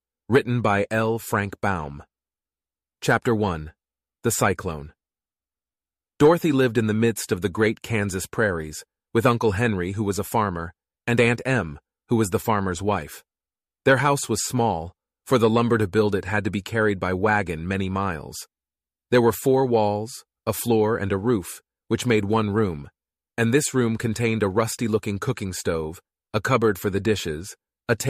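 No technical faults can be heard anywhere in this recording.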